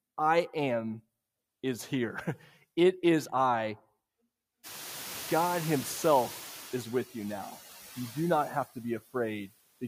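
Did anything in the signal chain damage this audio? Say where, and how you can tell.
Yes. Noise suppressor artifacts in call processing run throughout: residual background noise drops by about 13 dB between phrases and swells back under speech as per-band gains switch frame by frame.

Noise suppressor catching up, also call processing: room noise jumps around 4.5 s, and from 4.63 to 6.86 s it passes with only about 7 dB reduction. It sinks before "with you now" once the noise estimate adapts.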